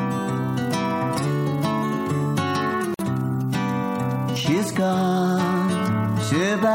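At 2.94 s there's a gap at a join of encoded pieces: a roughly 49 ms silence with smeared edges, left by untrimmed encoder delay and padding, before the sound resumes.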